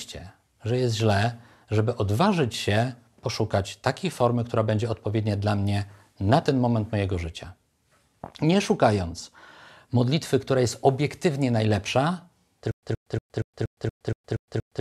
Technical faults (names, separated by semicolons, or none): stutter with silent gaps